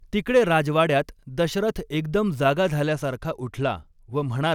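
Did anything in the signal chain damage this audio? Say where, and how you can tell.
Yes. A Bluetooth SBC bit pool drop damages the codec stage from 2.89 s to the end, just after "राजवाड्यात दशरथ एकदम जागा". The treble dulls and gritty noise rises. The bit pool fell from 31 to 15, about 105 kbps. Top sub-bands lost their bits, and the rest were coarsely quantised.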